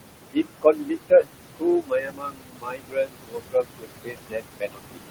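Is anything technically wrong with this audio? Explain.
Yes. Two related problems come from a noise suppressor working too hard on speech that sits only about 8 dB above the room noise.

Noise suppressor artifacts run through the whole clip. The suppressor pulls bands it judges to be steady noise down by about 21 dB, frame by frame, so the background drops out between phrases and swells under them. On a spectrogram the noise floor looks patchy and blotchy instead of even.

Speech cut by the noise suppressor happens from 0.33 to 1.28 s, where roughly half a second is affected in total, and again from 1.81 s to the end. Quieter speech is mistaken for noise and dropped by up to about 22 dB, so parts sound swallowed or faint. The waveform shows abrupt dips in the envelope, and the spectrogram shows speech energy missing in patches.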